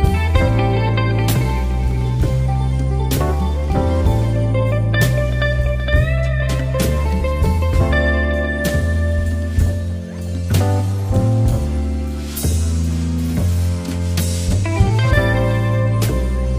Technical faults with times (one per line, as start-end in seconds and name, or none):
none